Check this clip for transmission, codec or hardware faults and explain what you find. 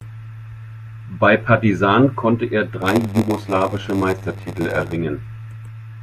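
One fault is present. From 2.81 to 4.96 s, after "konnte er", there is a block size mismatch with zero padding. Short blocks are padded to fit a 512-sample read, which adds gaps. The result is a 93.8 Hz buzz, and the speech slows to 0.938 times its normal speed.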